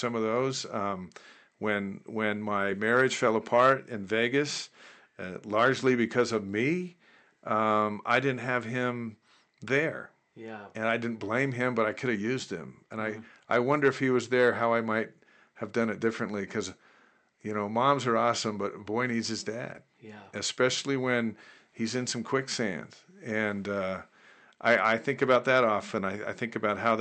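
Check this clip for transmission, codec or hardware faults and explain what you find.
No transmission, codec or hardware faults turn up in this clip, and the only background is the room noise, sitting about 54 dB below the speech.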